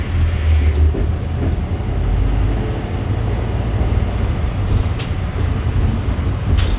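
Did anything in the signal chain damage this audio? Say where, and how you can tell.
No, nothing in the signal chain audibly damages this recording of sounds, which holds together without any dropouts, distortion, glitches or level changes along the way.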